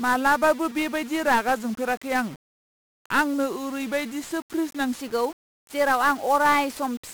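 From the start, the whole clip carries heavy 1-bit DFPWM compression. Each sample is one bit nudging a level up or down, so the speech sounds fuzzy, crackly and buried in hiss.

From 0.0 to 5.0 s, a section runs at the wrong speed, 0.875 times normal and about two semitones low. The voice drags, deep and slow, likely from playback on a mismatched clock.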